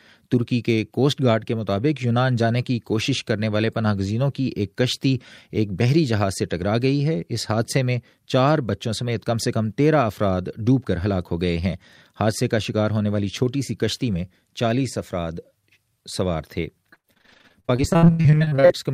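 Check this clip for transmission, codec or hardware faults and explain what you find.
One transmission fault appears near the end. From 16.93 to 18.72 s there is repeated packet loss, giving a robotic sound. Data stopped arriving, or arrived too late, around thirty times in under two seconds, with the longest gap about 85 ms. The receiver bridged each hole by stretching the last sound it had, so close to half of this stretch is concealment rather than real audio. The sound turns choppy, with fragments missing.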